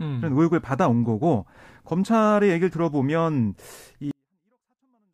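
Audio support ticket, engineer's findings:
24-bit alignment error (too quiet), 4.11 s to end of clip at 5.14 s. Samples written as 24-bit integers in the low bytes of a 32-bit word, then read back as full 32-bit integers, so every value lands 8 bits down. Speech stays clean and undistorted but drops abruptly by about 48 dB, almost inaudible. Probable component: sample-format handling at the interface or driver boundary.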